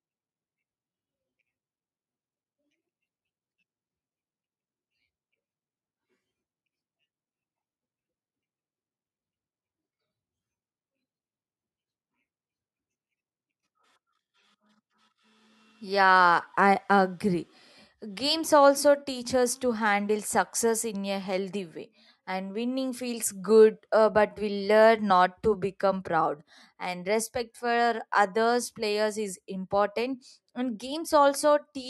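No technical faults are audible.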